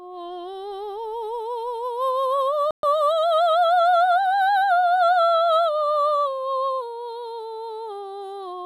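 A music clip in which the sound drops abruptly to silence from 2.71 to 2.83 s, a gap of 124 ms, then resumes. This is likely a Bluetooth stall: delayed packets let the headphones' buffer run empty, pausing playback until retransmissions arrived.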